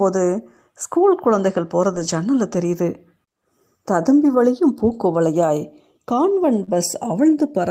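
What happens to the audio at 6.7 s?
Right around there, from 6.63 to 6.69 s, there's a short concealed packet loss. About 40 ms of the stream didn't arrive in time, and the receiver papered over roughly 39 ms of it by extending the last bit of sound it had, pitch-tracked if it was voiced and as shaped noise if not, before blending back into the real signal. You hear it as a quick smear or wobble rather than a dropout.

The tail end of that hole, 6.67 to 6.69 s, is a lost packet rebuilt from error correction. One 20 ms packet went missing, but the next packet carried a low-bitrate copy of it, Opus in-band FEC style, so the decoder played that instead of guessing. That sliver comes out rougher and noisier.

Underneath all of it, the channels are drifting apart. The two sides run on clocks that are off from each other by something like 70 ppm, so the inter-channel delay creeps up to around half a millisecond by the end. 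Summed to mono, that slowly sweeps comb notches through the spectrum, giving a slow flanging colour that's present at 6.7 s as well.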